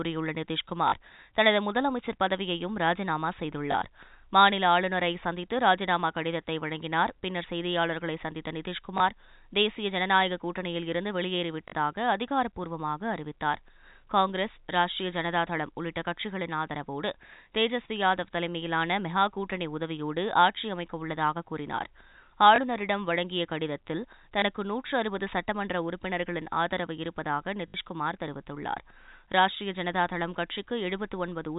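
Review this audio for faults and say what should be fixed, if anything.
Packet loss with last packet repeated occurs seven times in the speech: at 0.88 s (40 ms), 3.72 s (20 ms), 8.98 s (20 ms), 11.68 s (40 ms), 22.56 s (20 ms), 24.40 s (20 ms) and 27.68 s (60 ms). The gap lengths fit 20 ms packets. Each missing stretch is filled by replaying the previous packet. Those repeats seldom align with the voice's pitch period. The 40 and 60 ms runs buzz at about 50 Hz, heard as a brief robotic stutter against the narrowband G.711 telephone sound. To prevent it, reduce network loss with QoS or jitter buffering, and replace plain repetition with proper packet loss concealment or forward error correction.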